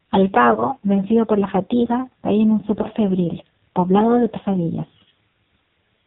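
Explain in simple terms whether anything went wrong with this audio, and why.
AMR narrowband mobile codec, throughout: the speech passed through a low-quality phone codec that removes everything above 4 kHz and rebuilds the voice from a rough model, so it sounds heavily buzzy and synthetic.

Lost AMR speech frames, at 0.54, 2.82 and 4.86 seconds: each time, one 20 ms chunk failed in transmission, and the decoder briefly guessed from the previous chunk, causing a short dip or warble.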